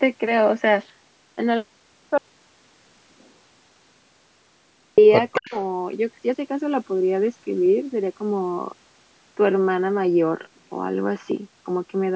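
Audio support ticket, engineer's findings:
Audio dropout to silence, 2.18–4.98 s. Speech cuts out mid-flow for about 2.8 s, gap is silent with no room tone. Likely input loss (device disconnect, link failure or mute) while the encoder kept writing silence. Content in the gap unrecoverable.

Echo leak, 5.33–5.65 s. Delayed copy of the voice, 233 ms behind, roughly 10 dB under the direct speech. Likely far-end echo canceller not fully removing its loudspeaker pickup, residual sent back into the call.

Speech suppressed in double talk, 5.39–5.55 s, inside the echo burst. Near-side voice ducks steeply, around 40 dB at worst, over roughly 150 ms. Likely echo canceller failing to separate talker from echo during overlap, attenuating both together.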